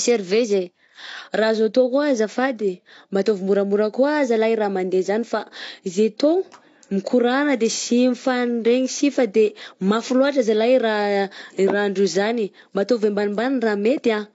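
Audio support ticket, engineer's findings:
Dull, smeared speech throughout; likely AAC compression, consistent with a low bitrate near 32 kbps. Spectrogram: flat, hard ceiling at 7.7 kHz, empty above.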